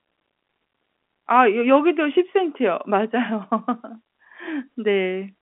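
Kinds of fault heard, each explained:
No faults can be heard in this speech clip. It carries the narrow band of G.711 telephone coding, roughly 200 Hz to 3.4 kHz, with nothing above about 3.7 kHz.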